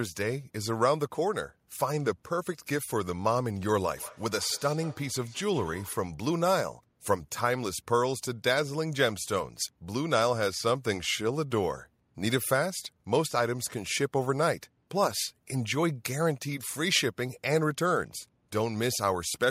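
Feedback echo between two devices, 3.96 to 6.16 s: another device replays speech into the microphone, returning roughly every 150 ms, about 20 dB down.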